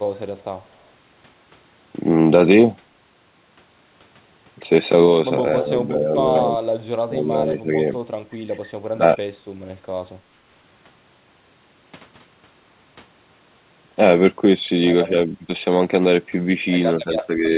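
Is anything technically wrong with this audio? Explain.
Yes, there's speech suppressed in double talk, seven short dips at 5.61–5.7, 5.88–6.09, 7.07–7.36, 7.59–7.72, 8.94–9.35, 15.1–15.49 and 17.04–17.49 s. The level sags briefly, mostly gently, but the one near 9 s drops sharply, almost to a gap. It's likely the echo canceller, hearing both ends at once, couldn't tell the talker from loudspeaker echo and turned everything down for a moment.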